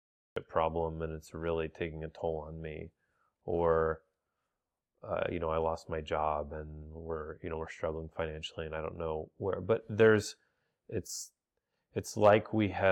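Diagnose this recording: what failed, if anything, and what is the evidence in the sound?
The capture began late, at the recording or storage stage, leaving a cut-off start. The file holds digital silence from 0 to 0.36 s, then the speech appears abruptly in the middle of a sound, with no natural attack or fade-in, because its onset was never recorded.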